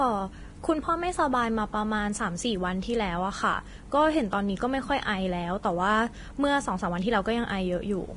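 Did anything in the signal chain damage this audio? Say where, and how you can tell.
Yes, at the codec stage, with damage running through the whole speech clip. Everything above 10.6 kHz is gone, and the treble that remains sounds hissy and grainy, with roughened tones and smeared consonant attacks. That points to heavy Vorbis compression, likely at a low setting consistent with roughly 30 kbps. The encoder quantised the upper residue so coarsely that detail turned into equal-energy noise. A spectrogram would show a hard ceiling at 10.6 kHz and speckled, blotchy energy beneath it.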